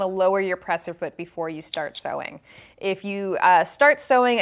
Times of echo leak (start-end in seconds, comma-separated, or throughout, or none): none